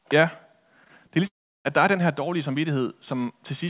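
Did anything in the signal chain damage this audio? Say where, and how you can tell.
Yes. The network stage caused short concealed packet loss at 0.84 to 0.88 s, 0.88 to 0.91 s and 1.07 to 1.11 s. About 20 ms went missing each time. The receiver extended the preceding sound to cover each gap, so these spots smear or wobble briefly.

A long network dropout follows from 1.27 to 1.67 s, just before "der er den her". The last sound is continued, then fades into silence. That points to lost arrivals as the likely cause. The clip returns without the missing part, band-limited to 4 kHz as G.711 allows.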